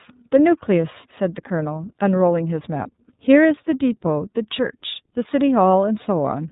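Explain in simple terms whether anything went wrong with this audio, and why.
Yes, something went wrong, and it lasts the whole recording. The speech has been squeezed through the iLBC codec, a compact format built for internet phone calls. It throws away everything above about 3.8 kHz, so the voice sounds thin and muffled, like an old phone line. It also rebuilds the sound in short, separate chunks, which fits 30 ms frames. That leaves the voice clearly rough and slightly artificial throughout.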